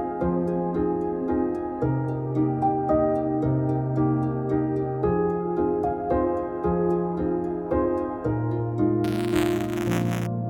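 From 9.04 s to 10.27 s there's buffer tearing: a gritty, robotic buzz at about 172 Hz riding on the sound, present only while there's signal. What's happened is the writer and the hardware reader of the ring buffer have drifted and now cross every period, so a small slice of each buffer replays audio from around ten milliseconds earlier, with hard joins on either side. That repeat rate fits a 256-sample buffer.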